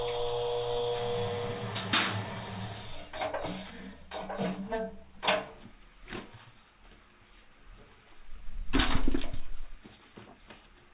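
A jitter buffer speed-up runs from 3.8 s to 5.57 s: the receiver's buffer had built up more audio than it targets, so it trimmed short slices, each one or a few pitch periods long, over and over until it had shed roughly 150 ms. Across that stretch the audio plays about 7% faster with its pitch unchanged, giving a briefly rushed, compressed feel before the pace settles again. The whole clip passes through a narrowband call path with no content above 4 kHz, which fits G.711 mu-law coding.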